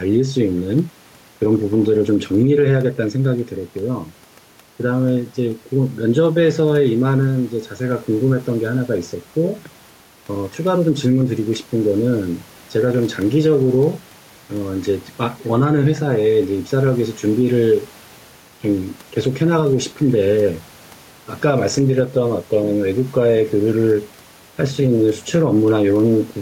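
Gain pumping runs through the whole speech recording. The background noise sits about 34 dB below the speech, and the gain swings by around 5 dB. The likely cause is mic gain set too high, with a fast limiter clamping every peak.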